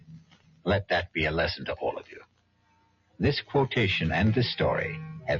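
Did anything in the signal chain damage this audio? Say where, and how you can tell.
Yes. The damage is in call processing: a noise suppressor applied to music or sounds stays engaged for the whole clip. Its gain rides up and down by something like 20 dB because it treats steady, non-speech content as background noise and keeps pulling it down.

Two sections show sound cut by the noise suppressor. From 0.00 to 0.66 s the level sinks by about 18 dB, and from 2.03 to 3.20 s by about 19 dB. In both spans the suppressor judged sustained energy to be noise and attenuated it well below the surrounding material.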